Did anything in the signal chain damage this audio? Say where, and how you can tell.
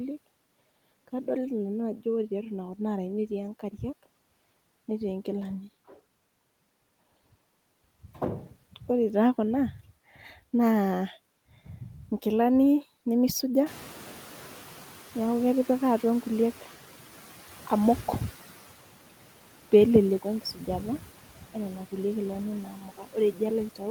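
Yes. Noise suppressor artifacts run through the whole clip, from the call-processing stage: the background is pulled down by about 11 dB frame by frame, so it dips between words and swells beneath them.

Noise suppressor catching up, 13.66 to 16.79 s: the room noise jumps by about 17 dB near 13.5 s, and the suppressor's noise estimate trails it. The louder background leaks through at first, then sinks by about 9 dB as the estimate adapts over roughly 3.1 s.

Speech cut by the noise suppressor, 22.8 to 23.15 s, just after "kulie kilani": the processor mistakes part of the speech for noise and turns it down by up to about 9 dB for around 150 ms, so that stretch sounds swallowed and faint.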